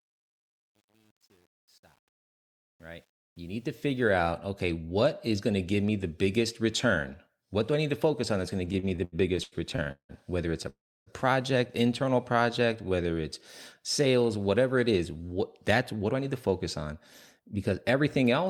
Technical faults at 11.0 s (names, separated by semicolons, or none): call audio freeze